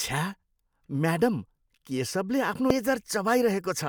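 A brief glitch at 2.70 s: damaged data in the compressed stream, where the decoder lost sync and jumped to the next intact frame.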